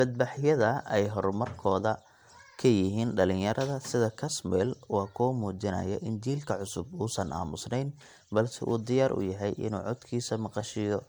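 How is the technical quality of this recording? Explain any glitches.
The recording carries one fault, present throughout the speech: generation loss. The audio was likely decoded and re-encoded with MP3 about four times, each pass near 100 kbit/s on a shifted frame grid, so quantisation noise and spectral holes pile up. The speech sounds swirly, smeared and hollow, with blurred attacks, and nothing remains above 20.1 kHz.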